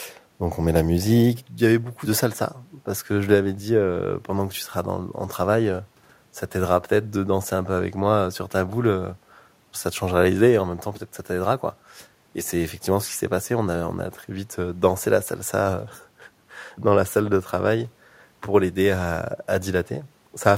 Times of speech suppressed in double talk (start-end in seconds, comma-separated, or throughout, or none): none